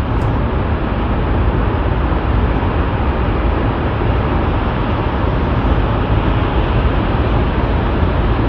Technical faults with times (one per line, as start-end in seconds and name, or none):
none